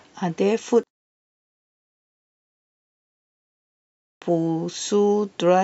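From 0.83 to 3.63 s the speech nearly disappears, dropping by about 32 dB, leaving only a faint, ghostly trace. That's the classic sign of one channel inverted: with one side's polarity likely flipped, everything centred cancels when the channels sum to mono.

Then at 3.85 s, after roughly 3 s of quiet, we get a clipped start after a pause. The output device seems to have dozed off and needed time to wake, so about 0.37 s of the opening is swallowed and the speech kicks in abruptly, missing its first sounds, through 4.22 s.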